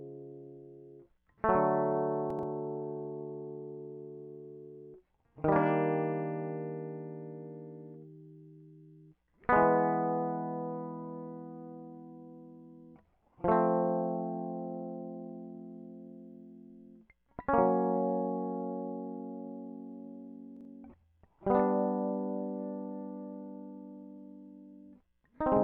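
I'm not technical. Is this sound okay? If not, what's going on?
No. At 2.30 to 2.43 s, and again at 20.57 to 20.65 s, the music briefly jumbles. These are chunks out of order. Short slices of sound, each about 43 ms, play late and out of sequence.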